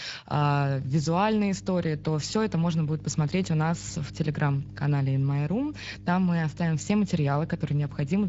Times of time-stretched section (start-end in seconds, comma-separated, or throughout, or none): none